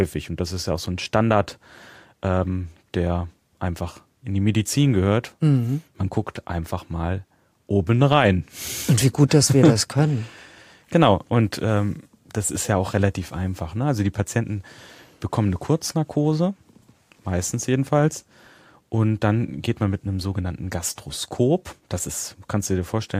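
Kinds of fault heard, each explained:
No technical fault can be heard anywhere in the recording; the speech signal stays continuous and intact throughout.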